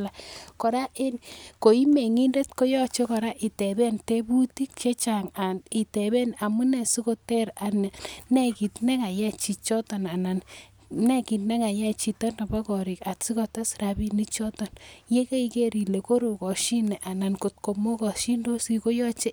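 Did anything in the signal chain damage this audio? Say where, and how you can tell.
No, nothing in this speech recording stood out on listening as damage from any stage of the signal chain.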